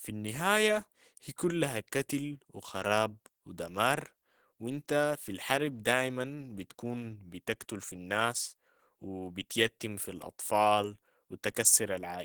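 From start to finish the speech sounds hoarse and somewhat muffled, with a grainy, rough texture on the upper frequencies that is plainly audible. This is likely Opus compression running at a low rate in its hybrid speech mode, where a speech-oriented coder handles the lower band and the top of the spectrum is filled in more coarsely. The character fits a bitrate of around 16 kbps, with the full bandwidth kept but thinly coded.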